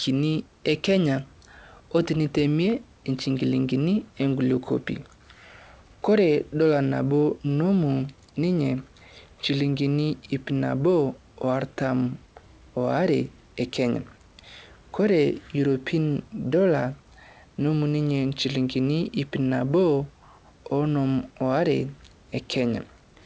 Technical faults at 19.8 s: none

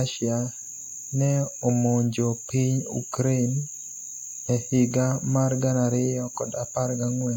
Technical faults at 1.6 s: none

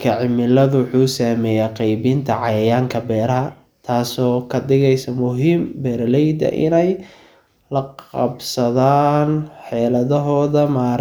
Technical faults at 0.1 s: none

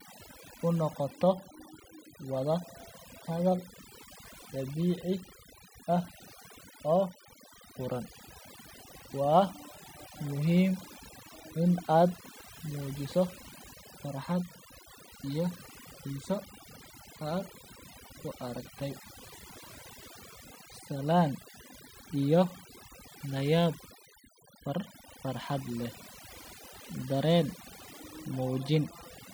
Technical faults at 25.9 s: overdone noise removal

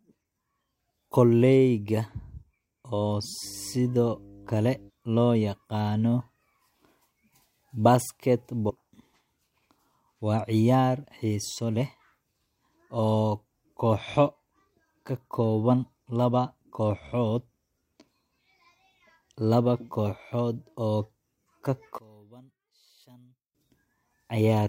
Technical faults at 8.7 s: damaged data in a compressed stream

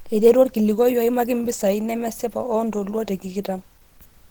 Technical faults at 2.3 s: Opus compression

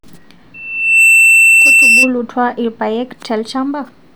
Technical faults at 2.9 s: none

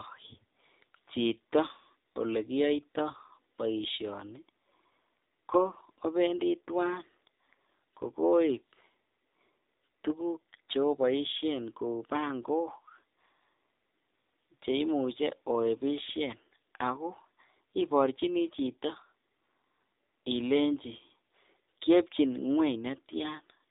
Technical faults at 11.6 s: AMR narrowband mobile codec

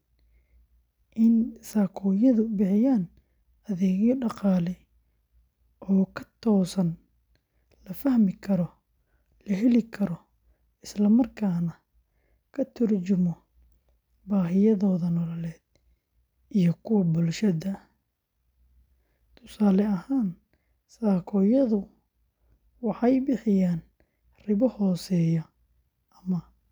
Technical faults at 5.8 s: none

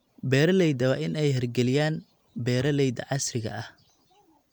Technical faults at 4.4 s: none

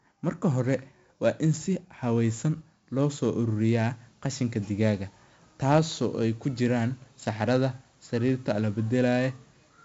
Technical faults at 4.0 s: 4-bit ADPCM compression

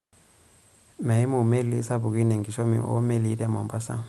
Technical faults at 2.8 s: none

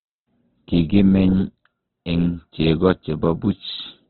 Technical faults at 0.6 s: Opus compression

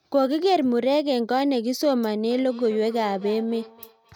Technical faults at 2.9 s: feedback echo between two devices

